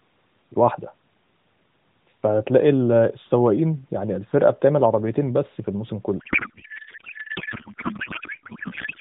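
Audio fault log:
6.20–9.00 s, codec payload misread: from 6.20 s to the end the speech gives way to garbled noise and warble that barely tracks it. The AMR frames, packed octet-aligned, are being unpacked as bandwidth-efficient, so every field lands in the wrong bits and the decoder builds nonsense from parameters that look valid. Unlike the light buzziness of the 4 kHz-limited narrowband coding before 6.20 s, which still follows the speech, this replaces the speech outright and never recovers.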